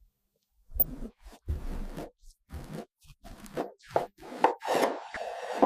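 DAB burbling appears at 0.80 to 0.83 s and again at 5.07 to 5.17 s. Weak reception let a small fraction of bit errors slip past error correction. Corrupted samples put short blips of noise into single sub-bands. Both bursts sound like short noise blips.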